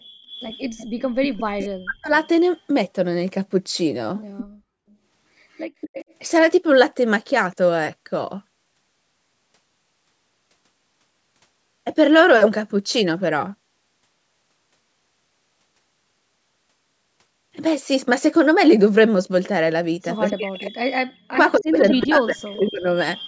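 From 0.23 to 2.28 s a faint copy of the speech trails it by 238 ms, about 20 dB down. This is an echo leak: the far end's loudspeaker sound reached its microphone, and an echo canceller that likely did not fully adapt let some of it back. On a spectrogram the harmonic stripes repeat, fainter, shifted about a quarter second to the right. Brief echoes return at 4.37–4.45 s and 5.55–6.14 s, now about 15 dB below the speech.

Overlapping the first echo, from 1.25 to 2.12 s, the speech is suppressed in double talk. For roughly 0.7 s it dips or cuts out in pieces, at worst by about 40 dB. The likely cause is the canceller mistaking the talker for echo while both sides spoke and turning everything down. The waveform shows abrupt notches in the envelope, and on the spectrogram the energy blanks out across the whole band, which here reaches up to 8 kHz.

The echo leak comes back at 20.3–20.71 s. 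Suppression in double talk follows from 20.34 to 22.88 s, gouging about 2 s of the speech with drops near 40 dB. A last echo runs from 21.31 s to the end, about 15 dB down with the same 238 ms lag.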